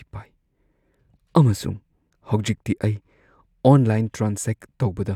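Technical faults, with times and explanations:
No technical faults, with times and explanations, to report for this speech clip.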